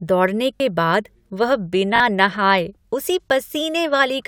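At 0.56 to 0.60 s, just before "बाद वह", and again at 1.96 to 2.00 s, between "बाद वह" and "नहाए उसी", a repeated buffer plays a 20 ms slice two extra times with hard joins, a brief buzzy stutter replacing about 40 ms of speech, not a silent dropout gap.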